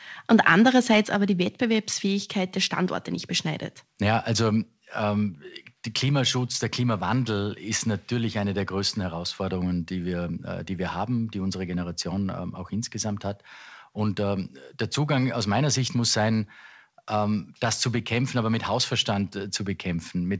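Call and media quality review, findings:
Microphone volume stepped down at 1.05 s: speech and background drop together by about 4 dB in one instant step and stay there. Likely cause: the call software lowering the capture device's input volume. A single hard step, not a gradual AGC ride or a brief dropout. Band tops out at 8 kHz, consistent with a G.722 call path.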